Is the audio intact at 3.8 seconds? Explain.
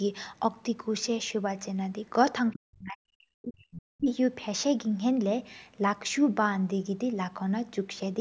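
No. At 3.8 s the sound sits inside a stretch of speech suppressed in double talk, running from 2.54 to 4.08 s. The talker's level sinks deeply, at worst by around 40 dB. The likely cause is an echo canceller that hit simultaneous talk from both ends, could not tell near speech from loudspeaker echo, and attenuated the whole signal.

Overlapping that moment, from 3.72 to 3.82 s, is a short burst of the other side's voice leaking through, sitting roughly 15 dB below the talker. It comes through as a brief scrap of a second voice. This likely reflects the far-end signal, played on the talker's loudspeaker, reaching the microphone and not being fully removed by the echo canceller.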